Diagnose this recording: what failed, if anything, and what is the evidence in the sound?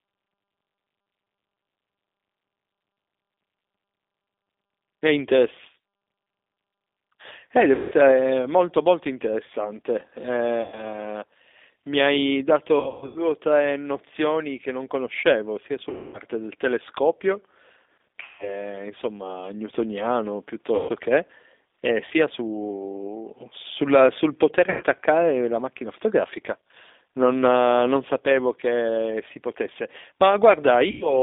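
G.729 codec, present throughout, at the codec stage: the speech sits in a narrow 250 Hz to 3.6 kHz line band and carries the rough, slightly synthetic texture of 8 kbit/s coding, where a vocal tract filter and sparse pulses rebuild each 10 ms frame.

VoIP packet loss concealed by the speech codec, a network fault, at 7.75, 10.62, 12.80, 15.90, 18.23, 20.75, 24.70 and 30.91 s. Each loss lasts 100 to 300 ms. The decoder stretches its last pitch and filter into a fading buzzy tone or coloured noise, and the sound stays weak briefly afterwards.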